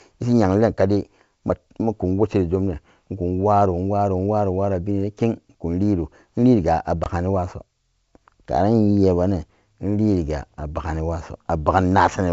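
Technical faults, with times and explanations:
7.04 to 7.10 s, packet loss on an ADPCM call: about 20 ms of speech drops to hard-edged silence, which fits one lost packet. The decoder's predictor and step size then disagree with the sender's. The returning speech sounds briefly disturbed, settling within tens of milliseconds.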